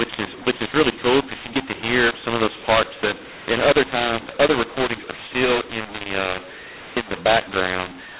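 Telephone speech coded with G.711 mu-law is being decoded as A-law throughout the clip, a mu-law and A-law mix-up that scrambles sample levels. The speech turns harsh and distorted, with quiet passages lifted into noise, over the usual 4 kHz telephone band.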